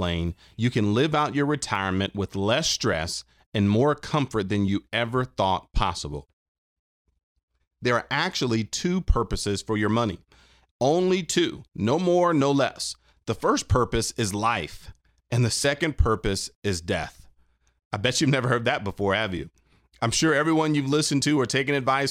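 Speech recording, with nothing technically wrong with it.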